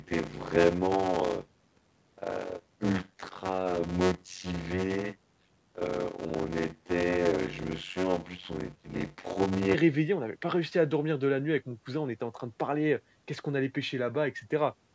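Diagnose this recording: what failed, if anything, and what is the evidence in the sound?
From 0.00 to 9.75 s the speech carries a steady buzz at about 91.9 Hz and runs at roughly half speed (0.533×) while keeping close to its normal pitch. This is a block size mismatch (padded) at the driver or buffer stage. The writing side delivers short blocks, which fits 256 samples, into larger reads. Each read is topped up with zeros, so a gap repeats at the block rate, and the sound stretches by the ratio of the two block sizes.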